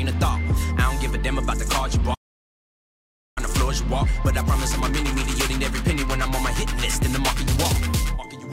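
At 2.14 s the player most likely ran dry of buffered data, or its playback thread was held up, so nothing reached the output until it caught up at 3.38 s. This playback stall cuts the sound off abruptly in mid-flow, leaving a dead gap of about 1.22 s before the audio picks up again. The break is a clean stop rather than a fade, and its length makes it plainly audible as an interruption.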